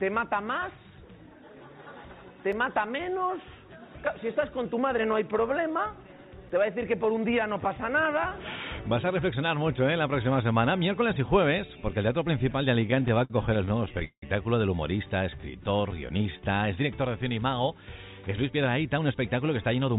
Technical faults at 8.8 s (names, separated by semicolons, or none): none